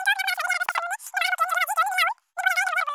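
Across the whole clip the speech runs three times too fast and about 19 semitones too high, which fits 16 kHz audio played back at 48 kHz. It is a wrong sample rate: the samples were never converted, so speed and pitch rise together.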